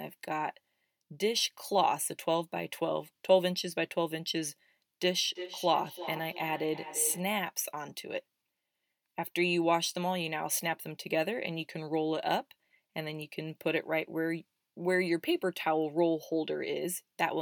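Speech clip with a feedback echo between two devices from 5.35 to 7.33 s. Two devices on the same call in one room let the sound loop back. Repeats arrive roughly every 300 ms, the loudest about 11 dB below the speech.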